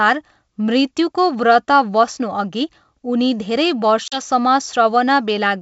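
A speech clip carried over what sounds like G.722 wideband coding, crisp up to about 7 kHz, which fits its full 64 kbit/s mode. The trouble is packet loss on an ADPCM call from 4.08 to 4.21 s: a 40 ms hard-edged gap, likely a couple of dropped packets filled with silence. Because ADPCM decodes each sample relative to its predictor and step size, the receiver's state drifts from the sender's. So when speech resumes it comes back with some brief distortion before it settles.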